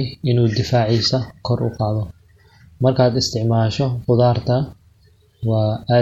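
Throughout the speech, the sound has a watery, swirling texture, with the upper treble shaved off and s sounds turning metallic and chirpy, while consonant onsets blur rather than snap. This is plainly audible MP3 compression, likely from an encoder starved of bits, which fits a rate around 64 kbps: it capped the bandwidth and dropped quiet frequency lines that flicker in and out between frames.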